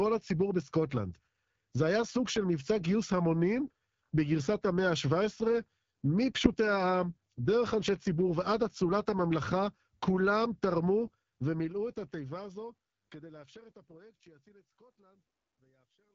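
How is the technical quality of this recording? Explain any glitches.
The recording is coded speech with audible damage. AMR wideband (HD Voice) coding runs throughout. The raspy, rough texture fits a low rate near 8.85 kbit/s. Nothing sounds above 7.5 kHz. The closing fade from about 11 s to 16.1 s is smooth.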